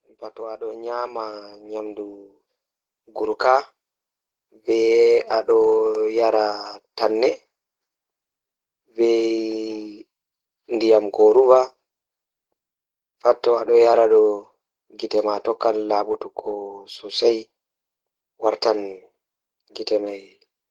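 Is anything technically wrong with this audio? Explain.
Yes. From 0.35 to 5.19 s there's automatic gain rising: the AGC decided the input was too quiet and slowly pushed its gain up by about 14 dB. Because it's one gain on everything, the speech and the background noise swell together over those five seconds.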